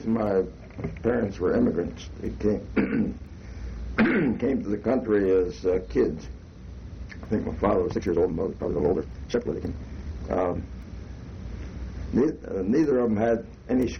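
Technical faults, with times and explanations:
7.85 to 10.57 s, time-stretched section: the pace abruptly jumps to about 1.9 times normal while the pitch stays put, so this stretch sounds rushed. The likely cause is software squeezing the passage to fit a shorter length by dropping short pieces.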